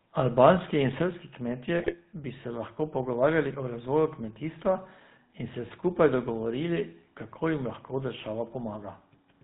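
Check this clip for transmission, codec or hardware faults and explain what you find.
Three faults are audible in this speech clip: GSM full-rate coding throughout, one sudden level drop, and a short burst of decoder damage.

GSM full-rate codec, throughout: the sound has the plainly audible buzzy, gravelly roughness of pulse-excited vocal-tract modelling at about 13 kbps, with nothing passing above 4 kHz.

Microphone volume stepped down, at 1.02 s: voice and background both fall by about 4 dB at once, most likely automatic gain control cutting the device's input level in one step.

GSM bit errors, 1.77 to 1.95 s: corrupted filter, pitch and gain values distort the decoded frames, and the speech breaks into squawks, pops and gargling. This fits roughly seven damaged frames.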